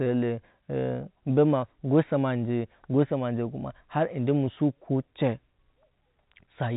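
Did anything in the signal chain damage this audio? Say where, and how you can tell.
No, nothing in this speech stood out on listening as damage from any stage of the signal chain, beyond the narrow telephone band of the G.711 coding it passed through.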